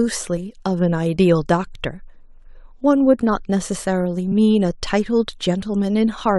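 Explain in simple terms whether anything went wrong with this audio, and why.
At 0.36 s the speech skips forward. This is compressed frames skipped: one chunk of the compressed audio, about 23 ms, never played.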